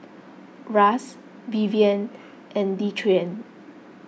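No technical faults can be heard anywhere in this speech.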